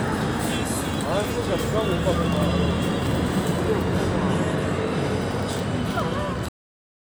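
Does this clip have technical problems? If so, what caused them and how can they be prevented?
Yes. There is a cut-off end at 6.49 s. The final buffers were never written, so the sound stops in the middle of an event and falls straight to digital silence through 7.06 s, with no natural decay. On a waveform this appears as an abrupt stop into a flat line. On a spectrogram, all energy ends at a sharp vertical edge followed by blank space. To prevent it, flush and drain every pending buffer before closing the recording or stream.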